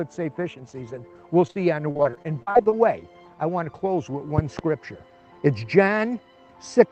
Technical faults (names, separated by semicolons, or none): repeated packet loss (robotic sound); loud pop